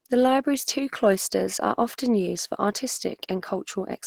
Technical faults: Opus compression

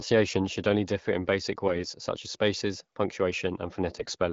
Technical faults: AMR bit errors

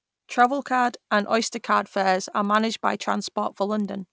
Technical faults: resampler restarted on every block

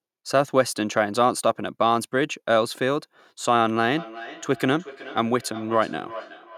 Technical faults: feedback echo between two devices

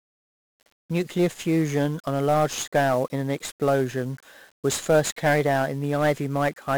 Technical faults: 1-bit DFPWM compression

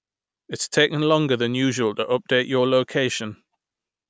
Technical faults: none

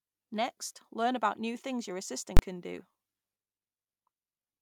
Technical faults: invalid numbers at full scale

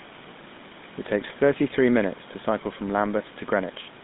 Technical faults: GSM full-rate codec

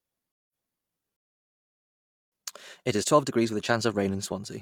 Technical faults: stream reconnect; playback stall; time-compressed catch-up

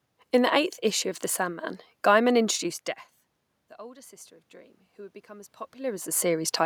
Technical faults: automatic gain rising

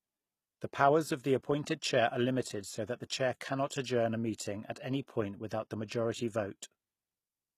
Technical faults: HE-AAC compression

